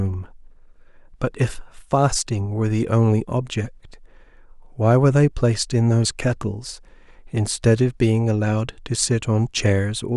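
No faults are audible anywhere in this speech recording.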